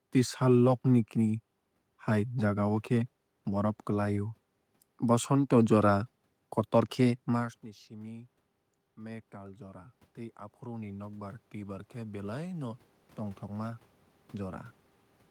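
Right after "ni simi", from 8.82 to 14.65 s, there's automatic gain rising. The input drops by about 21 dB once the talker moves back around 7.5 s, and the gain control slowly pushes up about 10 dB, so voice and room noise swell together.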